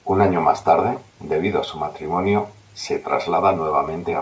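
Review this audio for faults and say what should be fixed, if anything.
Nothing stood out on listening, so there is nothing here that needs fixing.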